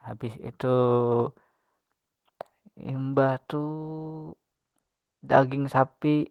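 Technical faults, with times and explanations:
No technical faults turn up anywhere in this speech recording. There is nothing to list with a time or an explanation.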